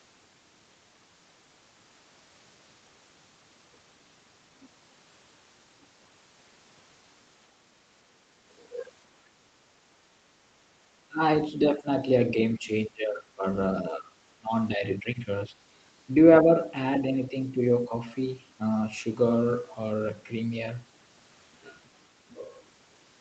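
The echo canceller likely mistook overlapping talk for loudspeaker echo and turned this side down. The result is speech suppressed in double talk, heard as the speech dipping in level or breaking up at 11.09, 11.52, 12.35, 13.82, 16.43 and 17.03 s. The deepest cuts, about 15 to 20 dB, fall between 11.09 and 15.54 s, while the last two are only slight dips.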